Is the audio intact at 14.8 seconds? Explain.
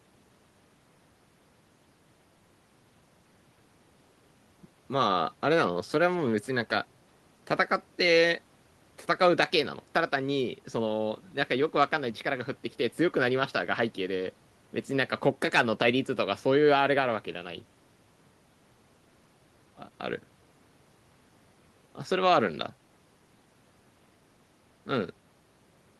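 Yes, the audio is intact at 14.8 seconds, with no dropout, click, distortion or other fault at that moment.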